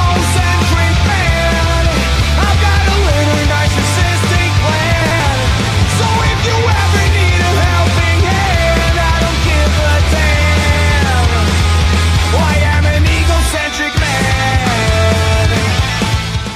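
At 5.02 to 5.20 s the audio has chunks out of order: a block of about 93 ms arrives one chunk late and plays after its successor. Nothing is missing, but the swapped sequence sounds like a brief jumbled stutter.

At 15.02 to 15.04 s a corrupt frame is decoded: flipped bits in a single compressed frame are played as though valid, so energy lands at the wrong frequencies for that frame. The result is a short chirp-like blip in the sound.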